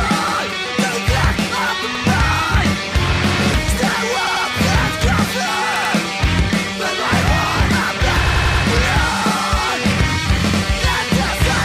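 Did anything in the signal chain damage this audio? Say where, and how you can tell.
Yes. The driver or buffer stage failed to get fresh audio in time on six occasions and replayed its last block, a repeated buffer fault. Each repeated piece is about 93 ms long, which fits a 4096-sample buffer. The same fragment sounds twice at 0.28, 1.95 and 10.50 s, three times at 4.27 and 5.76 s, and five times from 8.27 to 8.64 s. Each is heard as a stutter with hard joins, adding time rather than dropping audio.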